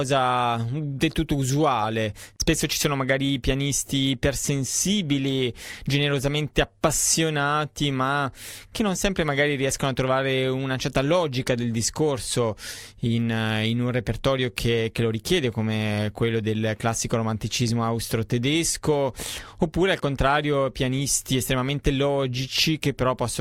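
No technical faults can be heard anywhere in the recording, with the signal holding steady and continuous throughout.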